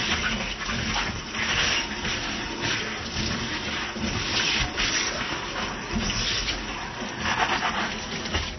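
Throughout this recording of sounds, the audio is dull and smeared, with nothing above 6 kHz and a warbling, fizzy texture on sustained sounds. This points to AAC compression, likely AAC-LC at a low bitrate consistent with about 24 kbps, which strips the top band and coarsely quantises the rest.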